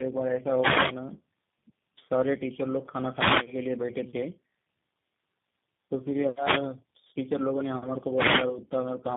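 Throughout, the speech shows tandem speech coding. It sounds rough, muffled and warbly, with nothing above about 3.7 kHz. This fits three low-rate coders in a row (GSM full rate twice, then G.729A), each re-encoding the previous one's decoded output. Unlike a single codec's artefacts, the damage compounds.

At 0.56 to 0.96 s, 3.04 to 3.56 s and 8.14 to 8.47 s, a wireless microphone noise hit breaks in as a brief swish of static. The radio signal fades and receiver noise rises. Unlike the steady coding roughness, these are short bursts.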